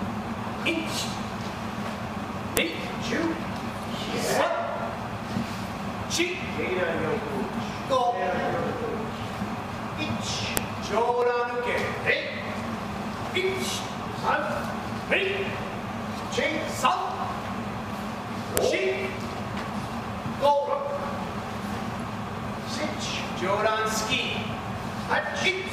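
Sharp, loud clicks snap through the audio at 2.57 s, 10.57 s and 18.57 s, exactly 8 s apart, regardless of the signal. This is a file header played as audio: 8 s WAV pieces were joined with headers intact, so those bytes play as samples.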